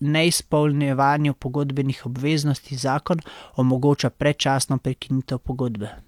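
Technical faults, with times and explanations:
No technical faults can be heard anywhere in this speech.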